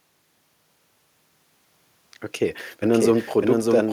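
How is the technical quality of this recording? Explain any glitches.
The recording has one clear glitch, a doubled audio track, running from 2.82 s to the end of the speech. A second full-band copy of the speech enters abruptly, trailing the original by roughly 0.7 s at about 5 dB quieter, so later syllables overlap earlier ones. The likely cause is the same signal being captured again through a slower path. Unlike a room echo or reverb, the copy doesn't decay or pick up any room colour. It simply switches on and stays.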